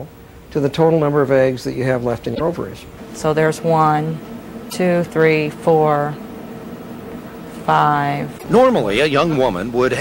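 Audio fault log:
2.31–2.41 s, 4.66–4.73 s, 8.35–8.44 s: damaged data in a compressed stream. Corrupted frames make the decoder misread data and lose sync, producing a brief chirp, squawk, click or short hole until it finds the next frame header.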